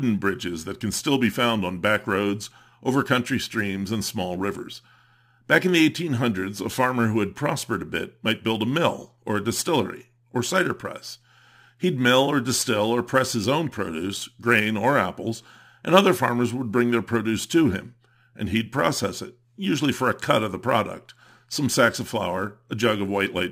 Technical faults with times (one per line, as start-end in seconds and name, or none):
0.00-23.52 sample clock jitter